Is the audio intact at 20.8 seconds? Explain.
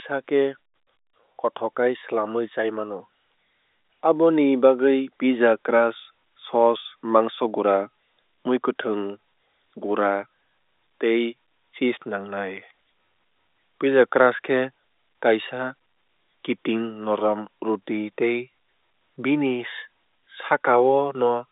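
Yes, at 20.8 s the audio is intact, with the speech carried cleanly through the telephone band of roughly 300 Hz to 3.7 kHz.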